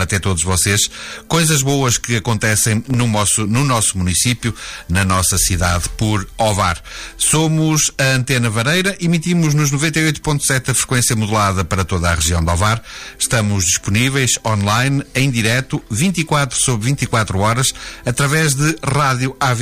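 2.86 to 3.02 s, processor overload crackle: repeated tiny silent gaps, consistent with missed buffers of about 1.5 ms, form a gritty burst, not one dropout.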